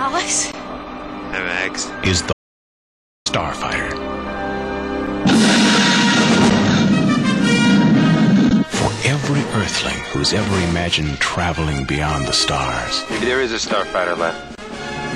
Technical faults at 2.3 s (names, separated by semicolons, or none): audio dropout to silence